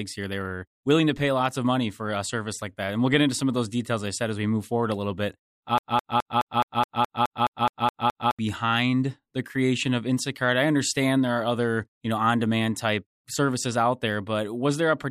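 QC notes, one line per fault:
5.78–8.39 s, broken-record loop: the player or stream likely stalled just after "forward a little bit" and kept resending the last fragment it held, so a 211 ms slice of speech repeats identically, back to back, 12 times, and the speech that should have filled those 2.6 s is lost.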